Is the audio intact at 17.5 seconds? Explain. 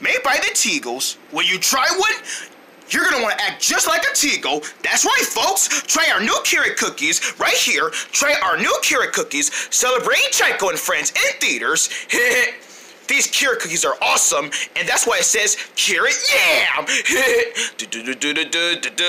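Yes, the audio at 17.5 seconds is intact, with no audible fault at that point.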